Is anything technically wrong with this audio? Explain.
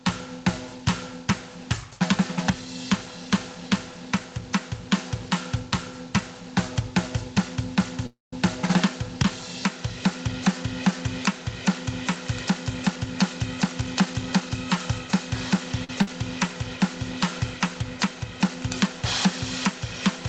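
Yes. The music has several faults from a call connection, on top of a level problem that runs through the whole clip.

Gain pumping is present throughout. The level swings by roughly 15 dB. The likely cause is input gain set far too high, with a fast limiter or compressor clamping down on every peak. Loud and soft parts end up squeezed together, and the music sounds flattened and breathing.

A call audio freeze runs from 8.06 to 8.33 s. The last sound is carried on as a fading fill, then goes silent for about 0.17 s. The music then picks up exactly where it stopped, so about 0.26 s has been inserted and nothing is lost. This likely comes from delayed packets draining the jitter buffer. The receiver could only fill the wait until they arrived.

Jitter buffer speed-up occurs twice, from 12.50 to 13.07 s and from 13.64 to 14.79 s. The music runs about 9% and then 8% fast, at unchanged pitch. 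The receiver had built up extra delay. To cut it, the receiver trimmed tiny pitch-period slices over and over, removing about 70 ms and then about 100 ms. The tempo audibly rushes, and the steady beat wavers.

A short stall from a late packet hits at 15.84 s. For about 46 ms a sound is held too long. The packet was missing when due, so the last sound was stretched until it came. Playback then resumed from the same point, with nothing missing.

A burst of packet loss follows at 16.02 to 16.09 s. About 50 ms of music is gone. The receiver continued the last sound as a fading fill, then jumped ahead, so the passage in between never plays. The whole clip is also limited to nothing above 8 kHz, which points to the Opus call codec.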